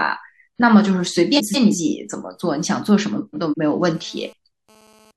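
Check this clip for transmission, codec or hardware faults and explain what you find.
Two kinds of fault are present in this speech clip: two short stretches of frames out of order, and GSM phone buzz near the end.

Frames out of order occur from 1.37 to 1.75 s and from 3.16 to 3.54 s. In each, two neighbouring blocks of about 171 ms, which fits runs of four frames, were decoded in swapped order, so the halves of the stretch play exchanged and no time is lost. The speech sounds like a garbled flutter. A spectrogram shows abrupt discontinuities in harmonic tracks and formants at the seams, and the waveform shows sharp steps.

GSM phone buzz runs from 3.95 to 5.11 s. A nearby 2G phone transmitting in bursts at 217 Hz had its radio pulses rectified by the audio circuitry, adding a hard, raspy buzz about 32 dB below the speech and unrelated to it. Because the phone was in a data transfer, the buzz comes and goes. 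A spectrogram shows a comb of harmonics spaced at 217 Hz, appearing in patches, and the waveform shows a regular pulse train riding under the signal.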